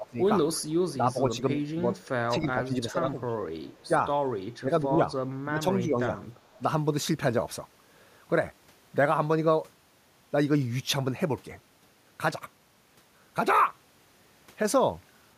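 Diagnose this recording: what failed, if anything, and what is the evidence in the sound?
Call processing: between 0.0 and 6.6 s the speech dips by up to about 10 dB, roughly a second and a half in total, likely speech suppressed in double talk by the echo canceller.

Also call processing: faint delayed copies at 0.53, 1.96, 3.64 and 6.44 s, lagging 315 ms and about 25 to 35 dB down. That's likely echo leak from a loudspeaker.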